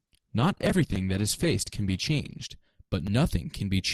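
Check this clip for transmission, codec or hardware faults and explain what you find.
One fault is present: an adaptive stream starting at a low bitrate. From 0.0 to 2.5 s the speech sounds thin and smeared, with its top end missing and nothing above 12.2 kHz, and coding artefacts are stronger. At 2.5 s the quality jumps up with no gap. The player began on a cheap version of the stream for a fast start, which fits about 16 kbit/s Opus, then switched to a richer one, consistent with 64 kbit/s, after measuring the connection.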